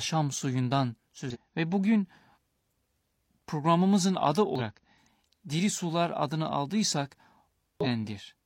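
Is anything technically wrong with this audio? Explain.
Yes. Damaged data in a compressed stream corrupts this speech at 1.30–1.37 s, 2.33–2.38 s, 4.55–4.61 s (just after "programımızın adı") and 7.81–7.87 s. Each time, faulty bytes make the decoder misread frames and hunt for the next header, giving a brief glitch. A spectrogram shows broadband smears or a gap, and the waveform shows an abrupt discontinuity.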